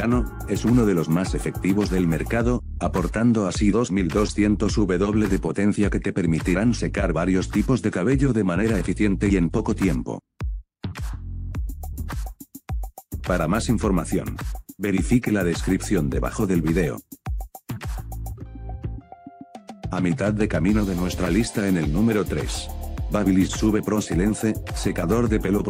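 No technical faults can be heard anywhere in the audio.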